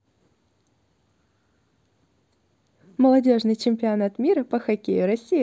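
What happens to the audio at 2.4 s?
Nothing goes wrong at 2.4 s; the speech carries on intact through that moment.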